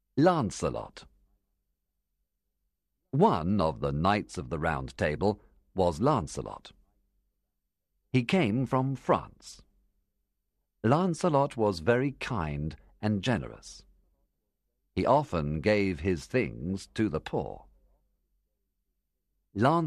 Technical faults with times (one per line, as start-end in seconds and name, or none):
none